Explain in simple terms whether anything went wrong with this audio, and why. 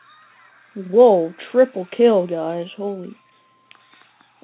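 Nothing went wrong; no faults can be heard here.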